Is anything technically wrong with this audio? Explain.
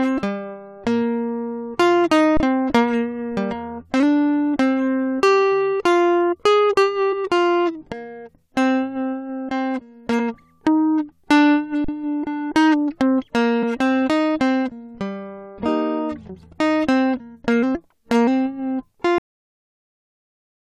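Yes, the music has three kinds of playback and decoding fault.

Underrun with held sample, at 2.37 to 2.40 s and again at 11.84 to 11.88 s. The output buffer ran dry, so the converter kept repeating its last sample value until new data arrived. That holds the waveform flat, leaving brief gaps of 30 ms and 40 ms where the music simply freezes. Nothing seems to be lost, because playback picks up where it paused, so each stop and restart is soft, with little or no click.

Compressed frames skipped, at 7.12 to 7.14 s, at 10.18 s, and at 13.60 to 13.63 s. Whole frames of the encoded audio never reached the output, either missing or rejected as damaged by the decoder. The music lurches forward by roughly 70 ms, 50 ms and 20 ms respectively.

Cut-off end, at 19.18 s. The final buffers were never written or played, so the music stops abruptly mid-sound and falls straight to digital silence with no natural decay. 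That silence fills the remainder of the clip.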